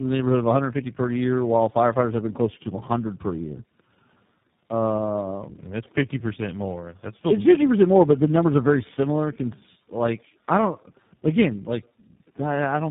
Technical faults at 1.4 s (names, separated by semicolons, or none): tandem speech coding